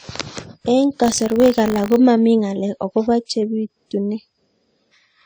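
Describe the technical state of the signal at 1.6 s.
At 1.6 s we're inside a stretch of buffer tearing running from 1.02 to 1.97 s. The writer and the playback hardware have drifted into each other, so a small sliver of every buffer carries audio from roughly 40 ms earlier, hard-spliced on both sides. That gives the speech a 50 Hz robotic buzz, which fits a 20 ms period.

Underneath, across the whole clip, the speech sounds dull, with two layers of compression grit stacked together. That's likely transcoding between lossy codecs, something like a low-rate AAC pass re-encoded to WMA.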